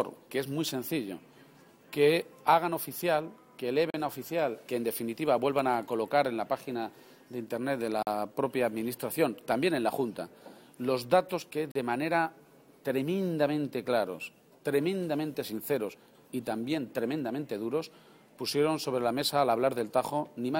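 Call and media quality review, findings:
Bluetooth stall, 3.90 s, 8.03 s, 11.72 s: hard dropouts to silence of about 40 ms each (38, 43, 38 ms), sound resuming after the gap. Likely wireless link interference delaying packets, headphone buffer running dry until retransmissions arrive.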